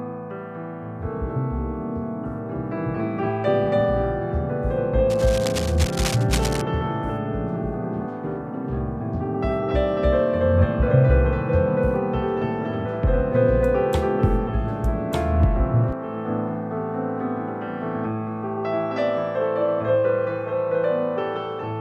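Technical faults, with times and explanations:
5.10 to 6.62 s, cable scratch noise: for about a second and a half, dense, uneven bursts of rasping noise sit over the audio at roughly 10 dB below it. The likely cause is a worn cable, connector or control carrying a DC voltage being moved, so its contact resistance shifts rapidly. Unlike isolated clicks or a steady hiss, this is a clustered, irregular scratching confined to that one stretch, and then it stops.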